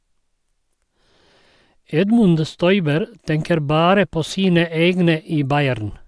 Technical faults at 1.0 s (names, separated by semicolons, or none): none